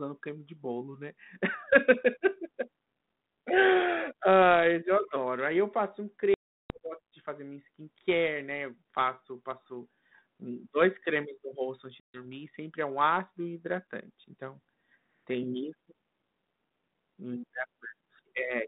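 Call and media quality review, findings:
Packet loss on an ADPCM call at 6.34–6.78 s, after "eu passo um", and 12.0–12.25 s, after "cremes no rosto antes": hard silent gaps, then desynced predictor causes slightly distorted speech on resumption.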